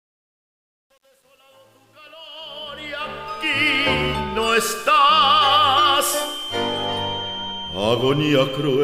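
The fade-in from the start to 3.77 s carries truncation distortion. Its grainy stepping fits a gain stage holding about 9 bits without dither. Worst until 2.91 s, it sounds gritty, unlike gate chatter, which switches cleanly rather than sounding gritty.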